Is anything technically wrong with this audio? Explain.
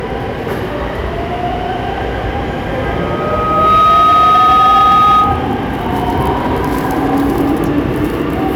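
Yes. From 2.79 to 5.58 s there is loudspeaker feedback squeal: a steady 1.2 kHz tone swells over roughly a second and then sits a few decibels above the rest of the audio. A microphone is hearing its own loudspeaker, and at 1.2 kHz the loop gain exceeds unity, so that frequency keeps reinforcing itself until the loop is broken.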